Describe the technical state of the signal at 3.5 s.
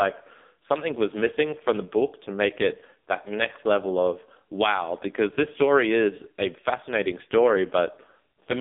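At 3.5 s the speech sounds buzzy, synthetic and boxed-in, with nothing above 3.7 kHz and a band of roughly 250 Hz to 3.6 kHz, as it does throughout. This is heavy AMR narrowband mobile codec damage, its sparse pulse-excited vocal model pointing to a low rate near 5.9 kbps.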